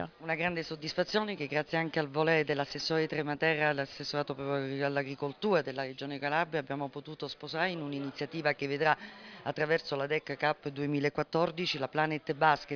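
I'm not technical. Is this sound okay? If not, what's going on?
Yes, it's fine: nothing in it stands out as a problem, so you can relax about this one.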